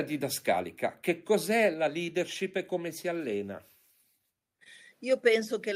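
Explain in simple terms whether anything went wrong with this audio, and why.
At 1.74 s the speech and background suddenly get quieter. That's a microphone volume stepped down, likely the call software turning the mic input down in one go.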